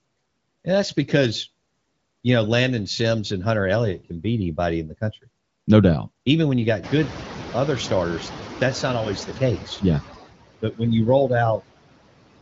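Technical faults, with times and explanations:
Throughout: noise suppressor artifacts. The suppressor pulls down the frequency bands it judges to be steady background, by about 21 dB, and it recalculates this frame by frame. The background therefore sinks in the gaps and swells back under the speech as the gain opens.
6.83 to 9.29 s: noise suppressor catching up. Just after "when you", the room noise jumps by about 20 dB at around 7 s. The suppressor's noise estimate still reflects the quieter background, so at first it removes only about 7 dB and the new noise comes through with less reduction. Over roughly 2.5 s the estimate adapts, and the background steadily sinks until full suppression returns.
10.62 to 10.81 s: speech cut by the noise suppressor. Just before "you rolled", the suppressor misreads part of the speech as background and attenuates it along with the noise, with the deepest drop about 15 dB. 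Roughly a tenth of a second is affected, so that brief portion sounds swallowed and faint. The level recovers once the speech energy rises clearly above the noise estimate.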